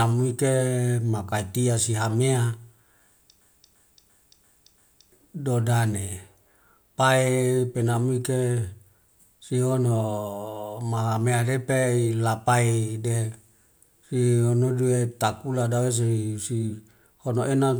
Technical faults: system hang loop

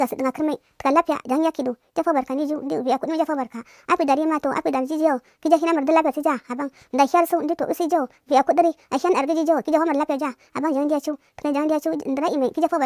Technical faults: wrong sample rate

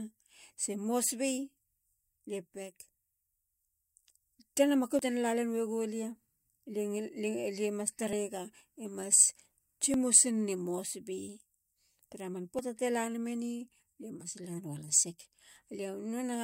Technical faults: dropped buffer (overrun)

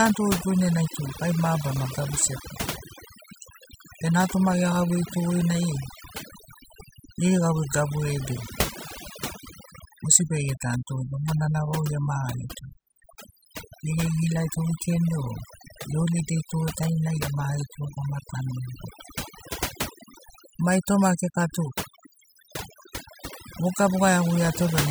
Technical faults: overdone noise removal

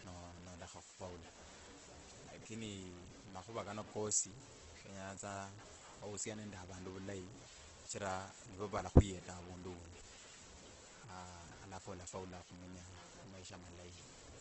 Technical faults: low bit depth without dither; Opus compression

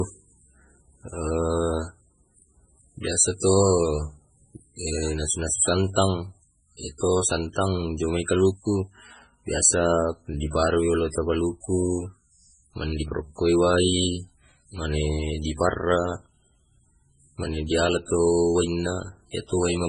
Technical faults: MP3 compression

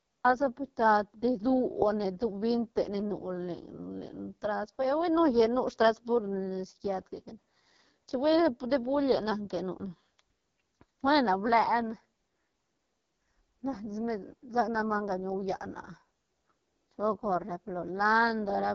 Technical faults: AMR wideband (HD Voice) codec

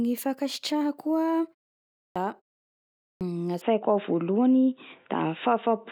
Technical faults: clipped start after a pause; input switched to a poorer device

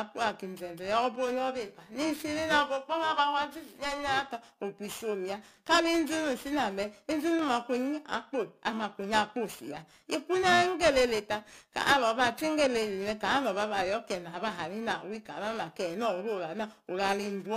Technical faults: periodic clock jitter

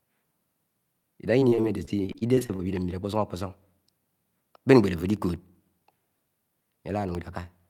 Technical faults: repeated packet loss (robotic sound); periodic USB or driver dropouts

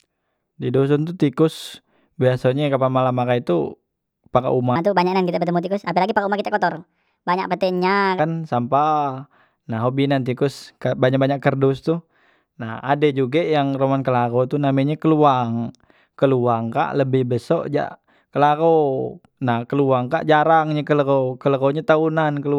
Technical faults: section at the wrong speed

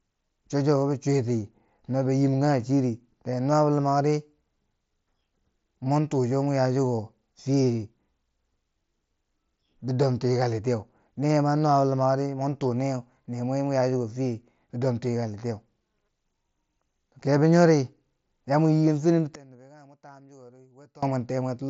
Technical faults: one channel inverted

